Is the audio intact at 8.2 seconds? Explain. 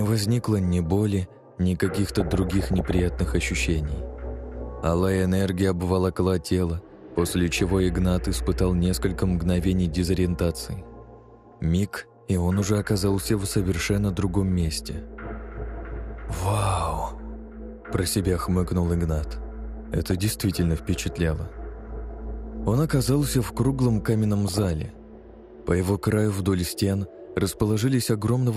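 No. At 8.2 seconds, as throughout, the sound is dull and plainly gurgling, likely MP2 compression starving sub-bands of bits, which fits roughly 80 kbps.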